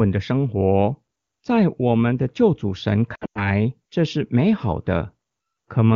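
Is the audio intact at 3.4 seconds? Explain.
No. Lost AMR speech frames affect 3.15 to 3.51 s. Radio errors left frames failing their checksum, so the wideband decoder repeated the last good pitch and vocal tract settings at falling gain. About 160 ms is missing, scattered over roughly 200 ms, which fits around eight 20 ms frames. The longest run is 100 ms. In a run of lost frames the sound drops to near silence within two frames, then returns briefly weak or rough.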